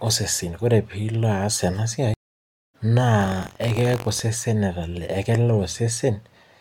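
At 2.14 s there's a stream reconnect: the audio drops out for about 0.6 s, then a fresh decoder picks up the speech roughly 0.7 s further on. From 3.19 to 4.21 s you get buffer tearing, with a robotic 46.9 Hz buzz. That fits a 1024-sample buffer where a small slice of each period replays audio from about a tenth of a second earlier.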